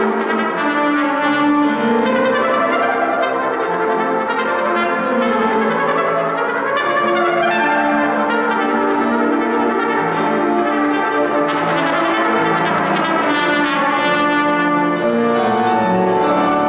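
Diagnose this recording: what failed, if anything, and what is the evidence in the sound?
Nothing in the recording points to a failure at any stage. It has come through a WebRTC call path working as intended, and the absence of anything above 4 kHz fits a narrowband telephone codec such as 64 kbps G.711 mu-law.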